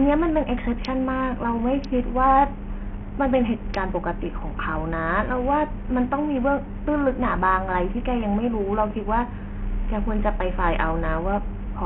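Bluetooth SBC compression runs through the whole speech clip, and the damage is heavy. The sound points to a very starved link, something like 48 kbps, where the likely cause is an SBC encoder with too small a bit pool. Its upper sub-bands get almost no bits, so the treble flickers in and out, while the remaining bands are coarsely quantised, leaving gritty noise and aliased hash clinging to the speech.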